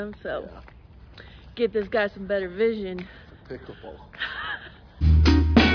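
Nothing in this bit of audio trips the ear as a technical problem.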